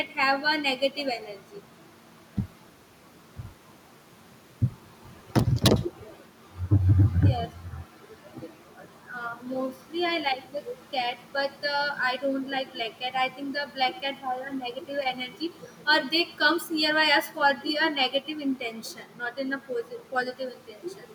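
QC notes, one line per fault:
throughout, echo with no canceller: unsuppressed loudspeaker pickup returns speech roughly a tenth of a second late, about 24 dB down; spectrogram shows delayed copies.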